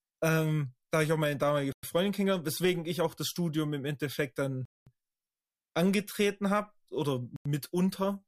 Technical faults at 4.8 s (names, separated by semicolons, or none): Bluetooth stall